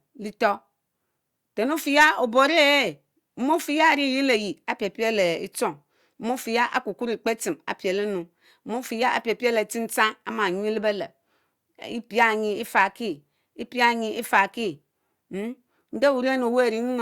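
No glitches, dropouts or other technical faults turn up anywhere in this recording of speech, so there's nothing to flag here.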